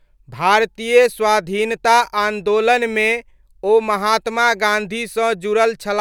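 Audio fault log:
No audible faults found.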